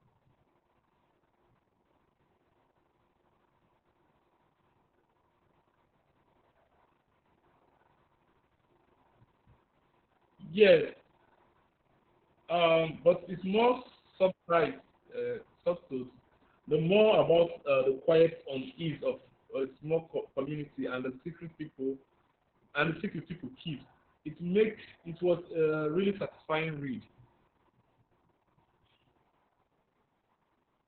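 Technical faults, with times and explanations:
Throughout: Opus voice compression. The speech has nothing above about 4.4 kHz, so it sounds muffled and telephone-like, which points to the narrowband SILK mode. The heavy damage, a hoarse, slightly robotic texture, fits a bitrate near 6 kbps. At that rate the linear-prediction coder keeps the spectral envelope but codes the excitation coarsely, and the frames run to around 60 ms. Consonants lose crispness.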